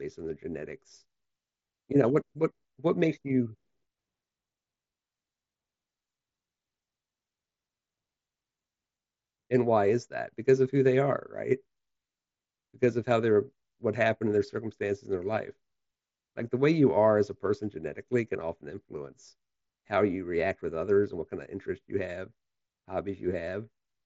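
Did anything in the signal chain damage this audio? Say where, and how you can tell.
No, nothing damaged this audio.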